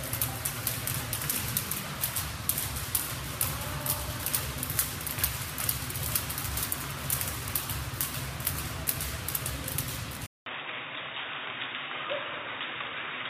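At 10.26 s the sound drops out for 200 ms. It returns dull and quieter, with nothing above 3.8 kHz. The input likely switched to a poorer device.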